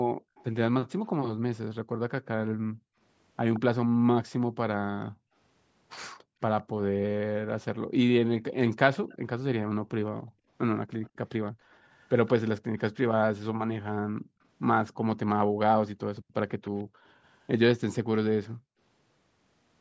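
From 0.14 to 6.4 s and again from 10.19 to 18.78 s, background gated by the echo canceller pulls the room sound down by up to about 38 dB for roughly 1.5 s in each stretch. The waveform shows floor-level gaps, and the spectrogram shows empty patches. Echo leak appears as a faint copy trailing 168 ms behind, likely from an incompletely cancelled loudspeaker path: briefly at 0.35–0.44 s, stronger at 3.54–3.6 s, then over 6.61–12.47 s and 16.15–17.97 s. On a spectrogram it shows as a weak, shifted duplicate of the harmonics.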